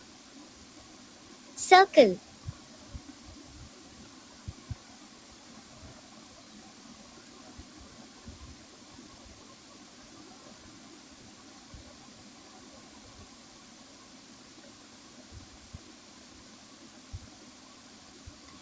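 Throughout the clip, a noise suppressor meant for speech treats held sounds as noise, pulling sustains down by a few decibels so they pump and thin behind each attack, above a G.722 band ending at 8 kHz.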